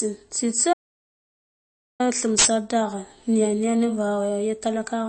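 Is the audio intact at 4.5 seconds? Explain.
No. The speech at 4.5 s, like the whole clip, has likely MP3 compression: watery, swirling artefacts and nothing above 8.3 kHz, unlike a clean low-pass, fitting roughly 32 kbps.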